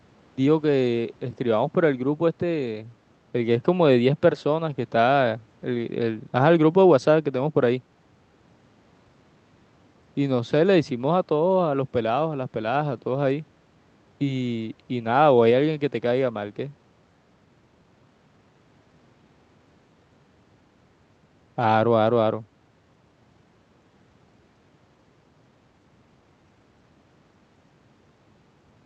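Nothing stood out on listening to the speech, and the narrowed top end from the call path's Opus coding at around 8 kHz is what that path normally gives.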